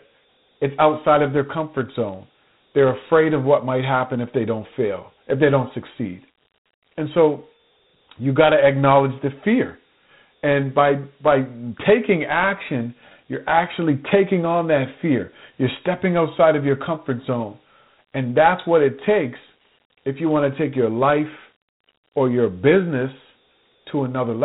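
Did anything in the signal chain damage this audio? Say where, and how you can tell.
Yes. At the codec stage, Dialogic VOX ADPCM coding leaves gritty hiss trailing the speech and nothing above 3.9 kHz, which fits 4-bit samples at 8 kHz (32 kbps).

In the processing chain, a filter restarted on every block from 1.67 to 2.90 s, after "it's outside of their" and before "afraid of what might". Each block starts from silence, producing a 21.5 Hz buzz that tracks the speech level. This fits 2048-sample blocks.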